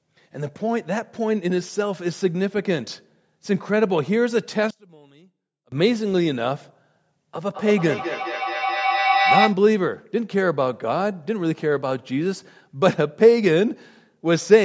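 Speech recorded through call microphone processing, whose spectrum stops at 8 kHz, carries two faults. From 4.71 to 5.72 s the level collapses by about 27 dB, leaving only a faint residue; the likely cause is one channel inverted, so summing to mono cancels the shared centre, and the waveform shrinks to a sliver. From 7.54 to 9.64 s a feedback howl builds, as the loop between a microphone and a loudspeaker adds gain on every pass. It narrows to a tone near 700 Hz, with repeats roughly every 200 ms, peaking about 1 dB above the speech. A spectrogram shows a bright horizontal line there.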